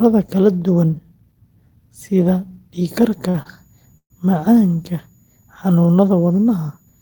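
At 2.99 s a switching supply whistle appears and stays to the end. It is a thin, high tone near 7 kHz, wandering between about 6.83 and 6.92 kHz. It sits at about 45 dB below the speech, so it is faint but steady. A switching power supply is running at an audible rate, and the slow drift follows its changing load.

At 3.29 s there is a short stall from a late packet. A packet missed its slot and the receive buffer ran dry. The last sound is held for 50 ms, then the speech resumes where it stopped. Nothing is lost. A second stall follows at 3.42 s, holding for 29 ms. Each sounds like a sound held a little too long. Together they push the speech 79 ms later.

At 3.97 s comes a call audio freeze lasting 128 ms. The last sound carries on and fades, then drops to silence for about 70 ms before the speech picks up again. No speech is skipped. A gap has been inserted instead, delaying everything after it. 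The likely cause is packets held up in the network long enough to empty the jitter buffer.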